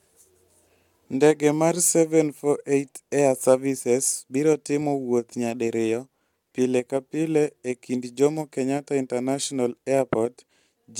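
No technical faults occur at any point in this recording.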